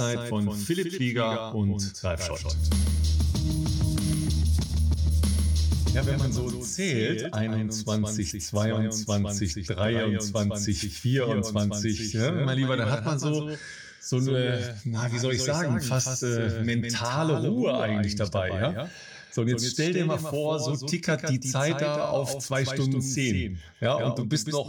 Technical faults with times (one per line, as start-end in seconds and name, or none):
0.00-24.68 doubled audio track